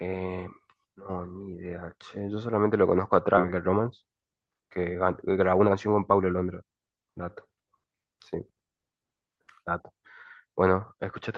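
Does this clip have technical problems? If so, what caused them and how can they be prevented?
Yes. At 3.37 to 3.39 s there is a skip ahead: roughly a second of speech is missing, and playback jumps forward with no fill, joining the two sides almost directly. This fits the receiver's jitter buffer overflowing and discarding queued audio, cutting the delay by about a second at once. Preventing it means sizing the buffer for burst arrivals and letting it shrink gradually by time-scaling instead of dropping blocks.

Two stretches show jitter buffer speed-up. From 3.51 to 4.79 s the speech runs at about 110% speed, and from 5.27 to 7.13 s at about 117%, at unchanged pitch, sounding hurried. The buffer was draining excess delay by removing short pitch-period pieces, roughly 150 ms and 300 ms in total. Smoother network delivery, or a slower and more conservative drain rate, would keep the pace natural.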